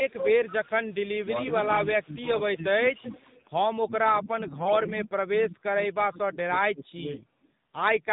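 The whole clip is speech through the AMR narrowband mobile codec, with nothing above 4 kHz and a buzzy, synthetic edge that fits a low mode around 7.4 kbps. The vocal-tract model is running short of bits, so the damage is plainly audible.

From 0.1 to 1.26 s there's echo leak: a copy of the far side trailing by 198 ms, only a few dB under the speech. Likely a loudspeaker phone whose echo canceller didn't clear its mic pickup. Quieter bits return at 2.95 to 3.42 s, 4.86 to 4.94 s and 7.2 to 7.48 s, well down.

The talker keeps getting squashed, likely speech suppressed in double talk, with the canceller ducking everything while both sides speak at once. There's a dip of about 10 dB across 1.21 to 1.54 s, a deeper one of about 15 dB over 2.01 to 3.11 s, and heavy chopping of up to about 30 dB across 3.84 to 7.21 s.

At 4.44 to 4.73 s AMR bit errors hit. Flipped bits on a weak link misplace the pulses and skew the finer pitch and gain values, so the voice keeps roughly its pitch and level but goes hoarse and gargly over what fits about fourteen 20 ms frames.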